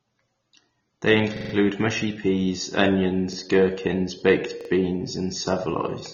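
Throughout, the speech was likely first encoded at a low bitrate (around 24 kbit/s AAC) and then saved again as 192 kbit/s MP3. This is low-bitrate audio saved at a high bitrate: nothing sounds above 6.9 kHz, so the sound stays dull and band-limited despite the larger file.

Three times, fresh audio missed its deadline and the device played its last buffer again. These repeated buffers are about 43 ms long, which fits a 2048-sample buffer. From 1.37 to 1.54 s, before "mushy peas", one slice repeats as a rapid multi-beat stutter. At 3.33 to 3.37 s, between "mushy peas" and "gherkins baked beans and", there is a single brief hitch. From 4.61 to 4.69 s, between "gherkins baked" and "beans and", a double stutter with hard joins stretches the sound slightly.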